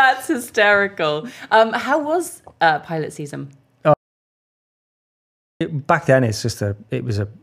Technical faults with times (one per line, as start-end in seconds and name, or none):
3.94-5.61 audio dropout to silence